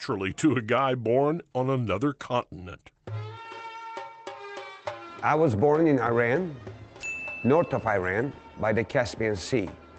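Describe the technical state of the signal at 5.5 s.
At 5.5 s the audio is intact, with no fault present at that moment.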